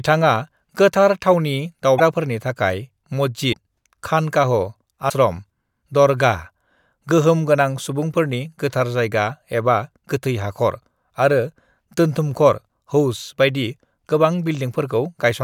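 At 1.97 s, 3.52 s and 5.08 s the speech skips forward. Each skip leaves a glitch of about 30 ms, roughly one 26.1 ms MP3 frame. The likely cause is a broken MP3 bit reservoir. Frames were lost, and the frame after each gap reached back for data it had stored earlier. It found bytes from the wrong frame and decoded them as nonsense. The repeats come about 1.5 s apart.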